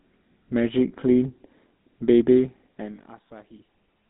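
From the start, the speech carries the GSM full-rate codec's signature: a buzzy, gravelly roughness from modelling the vocal tract and driving it with a coarse pulse train, which fits 13 kbps full-rate coding. The band sits roughly between 200 Hz and 3.7 kHz, so it sounds thin and phone-like.

At 2.94 to 2.99 s there's a short burst of lost GSM frames, about 40 ms of missing data. The decoder holds the last good frame's settings and repeats them, so you hear a brief rough, metallic ring instead of a gap.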